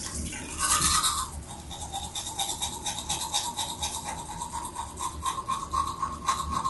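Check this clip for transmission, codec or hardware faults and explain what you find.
Two faults are audible: codec damage throughout, and two isolated clicks.

Low-delay AAC compression, likely AAC-ELD, runs the whole clip. Short frames smear fine detail into grainy roughness, and nothing sounds above 11.6 kHz. The damage fits a bitrate near 32 kbps and stays steady rather than arriving in bursts.

Dropped samples, likely, at 2.0 s and 6.08 s: under a millisecond is skipped, so the waveform jumps and clicks sharply. There is no audible gap, unlike a dropout.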